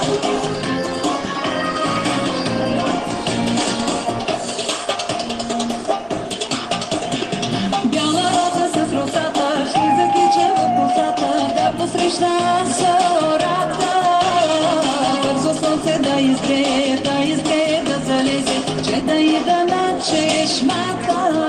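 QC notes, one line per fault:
No faults found; nothing to report.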